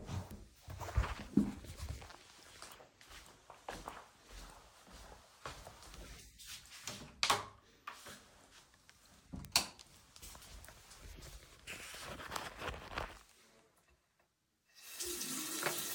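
A recording of sounds with two bit error spikes, single isolated ticks at 0.31 s and 9.45 s, peaking around -28 dBFS and -22 dBFS. Each is one corrupted sample where a flipped bit threw the value off and straight back, so it's a broadband click unrelated to the surrounding sound.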